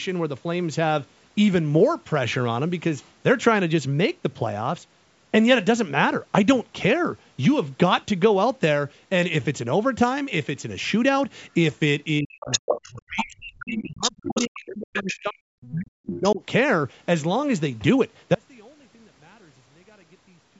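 From 12.2 to 15.47 s, and again from 15.7 to 16.41 s, the speech is suppressed in double talk. The level dips hard, by about 40 dB at its deepest. It is turned down across roughly three seconds, then another 0.7 s. The likely cause is an echo canceller that heard loudspeaker sound and local talk at once. It could not tell them apart, so it turned both down.

In and around those stretches, the other side's voice leaks through. It comes in scraps at 12.4 to 13.25 s, 13.59 to 13.82 s, 14.01 to 14.59 s, 14.93 to 15.21 s, 15.62 to 15.71 s and 16.16 to 16.34 s. These sit about 5 to 25 dB below the speech. The loudest are near 5 dB down. The likely cause is far-end audio from the loudspeaker that the canceller left in the microphone signal.

At 18.34 s the audio drops out to a faint residue and stays that way to the end. The cut is abrupt, not a fade. What remains is a faint sound about 30 dB below the signal. 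This likely means the wanted signal was lost while the path after the break stayed live. The band stops at 8 kHz, in line with normal call microphone processing.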